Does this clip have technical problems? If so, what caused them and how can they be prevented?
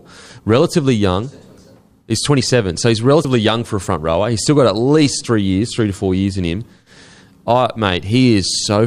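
Yes. At 3.24 s, between "so he's" and "young for a front", compressed frames are skipped: roughly 70 ms vanishes, consistent with about three 24 ms frames. Preventing it means checking file integrity after transfer and storage, and using error-protected delivery so no frames go missing or get rejected as damaged.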